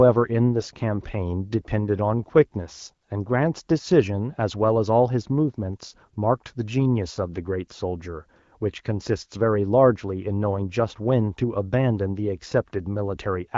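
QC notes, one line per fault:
5.86–5.98 s: AMR bit errors. Over roughly 0.12 s, about six frames of this wideband speech arrive with their weakly protected bits corrupted, at a bit error rate of about 3 percent. The excitation pulses land in the wrong places and the fine pitch, gain and spectral values drift, so the sound stays near its pitch and level but turns hoarse, scratchy and gargly. On a spectrogram the harmonic striations break up into smeared, noisy texture, and the waveform shows ragged, irregular cycles with no gap in level.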